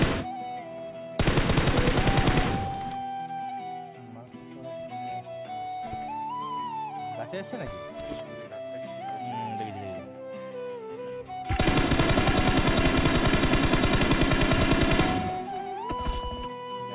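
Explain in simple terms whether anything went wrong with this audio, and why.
Nothing went wrong with this audio that a listener can pick out. No fault breaks into the sound at any point.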